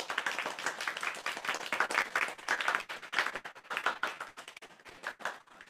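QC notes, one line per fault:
Throughout: block size mismatch (padded). There's a steady buzz at about 86.1 Hz, which fits one stage writing short blocks into a 512-sample read and padding the rest with silence. Those tiny gaps also stretch everything to 0.938x speed, with the pitch staying about normal.
1.21 to 5.70 s: repeated packet loss (robotic sound). From here to the end, chunks keep dropping out and each hole gets patched by smearing the last bit of sound forward. The sound turns choppy, with pieces missing, because the patches follow each other so closely.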